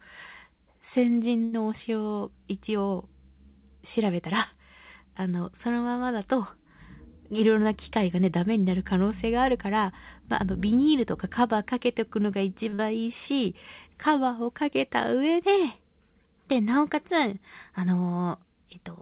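At 1.44 s a short stall from a late packet holds the sound for 83 ms. Nothing is lost, but it drags with a faint buzz or dip. From 7.18 to 7.93 s a jitter buffer speed-up plays speech at 109% speed. About 70 ms of pitch periods are cut, so it sounds hurried at the same pitch. At 12.69 s a second late-packet stall stretches the sound by 38 ms. From 12.75 to 12.81 s a short concealed packet loss fills 40 ms of missing audio with continued sound. It is heard as a brief smear. The call path has nothing above 4 kHz, which fits G.711 coding.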